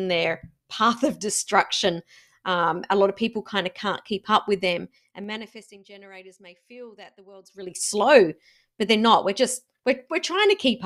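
Zipper noise from 4.78 to 5.85 s: the speech level drops by about 25 dB in unsmoothed 3 dB steps, roughly seven a second, each leaving a small click, so a ticking rides on the fade. At 7.43 to 7.78 s, a faster rise of about 25 dB, around twenty steps a second, zips the same way.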